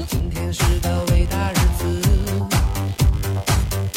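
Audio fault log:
throughout, computer activity noise: shifting processor and peripheral load disturbs the ground the audio circuit shares, so a buzzing, scratchy pulse of roughly 70 Hz rides under the sound, about 25 dB down, rising and fading with the machine's work rather than the audio itself.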